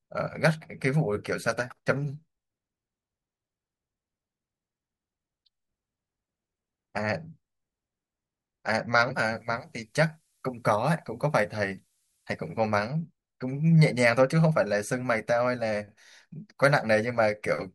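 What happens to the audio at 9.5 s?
A switching power supply runs in an audible burst mode or beats with another one from 9.14 to 12.68 s, producing a switching supply whistle: a thin tone wandering between about 14.0 and 14.1 kHz, roughly 30 dB below the speech.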